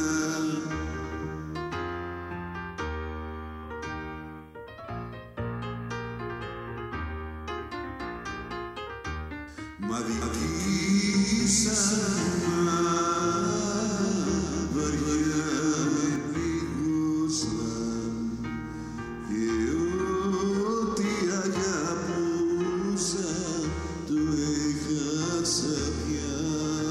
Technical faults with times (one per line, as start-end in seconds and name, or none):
10.22-16.16 doubled audio track